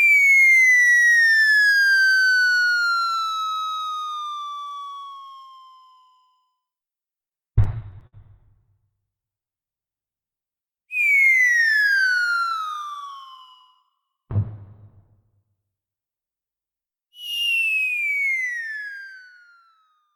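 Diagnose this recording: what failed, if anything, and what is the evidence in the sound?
Repeated stalls (stutter) from 7.21 to 8.15 s point to a network and jitter buffer problem. Packets arrived late, the buffer ran dry ten times, and the receiver stretched the last sound to cover about 174 ms, with the longest hold at 56 ms.

Jitter buffer speed-up from 11.66 to 11.97 s shows that same buffer recovering. Holding more delayed audio than its target, the receiver trimmed short pitch-period slices, around 40 ms in total. The sound runs at 111% speed with unchanged pitch and comes across as hurried.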